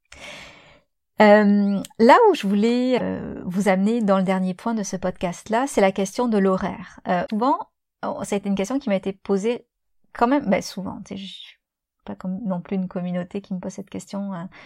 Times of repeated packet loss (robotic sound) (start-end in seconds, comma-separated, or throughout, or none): none